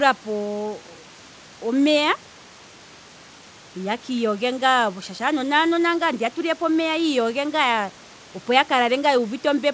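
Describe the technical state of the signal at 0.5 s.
At 0.5 s the speech signal is intact, with only the room noise, about 27 dB below the speech, and the call-codec bandwidth, which stops at 8 kHz.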